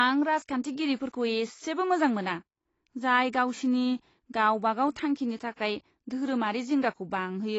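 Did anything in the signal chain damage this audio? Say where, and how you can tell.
Yes, at the codec stage, likely low-bitrate AAC compression throughout: nothing above 7.9 kHz, dull, smeared speech and fizzy sibilants, which fits 24 kbps AAC-LC.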